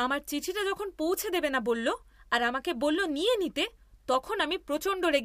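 From 1.77 s to the end, the speech carries a crude rate conversion: samples were linearly interpolated to a new rate with no anti-aliasing filter, and the error pattern fits a 48 kHz to 44.1 kHz change. The result is a faint, gritty fizz about 40 dB below the speech. Unlike steady hiss or harmonic clipping distortion, it is inharmonic and rises and falls with loud and high-frequency sounds, vanishing in the pauses.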